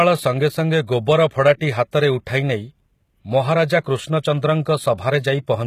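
Throughout the speech, the treble sounds synthetic and gritty, with s sounds turning metallic and lispy and nothing above 14.9 kHz. This is likely HE-AAC compression: the upper band is rebuilt by copying lower harmonics upward, and the plainly audible damage fits a bitrate near 20 kbps.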